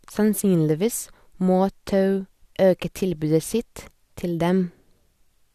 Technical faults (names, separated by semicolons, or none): none